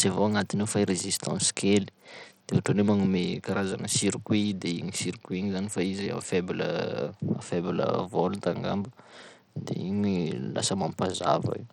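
From start to finish the speech carries plainly audible damage of the kind Bluetooth SBC compression leaves, likely from a low-bitrate link, and the grit fits something around 80 kbps. With too few bits, the upper sub-bands starve: sibilants and treble flicker in and out while a gritty, aliased haze sits on the voice. A spectrogram shows the top bands breaking into patchy, blocky cells with a ragged upper edge, and noise smeared across the coarsely quantised bands.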